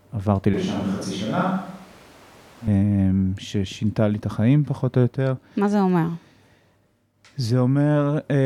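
At 0.54 s the speech abruptly turns roomy and hollow, with thinner bass. The level falls by about 5 dB. Room noise sits roughly 25 dB below the speech. At 2.67 s the close sound snaps back. This is likely a switch to a distant microphone.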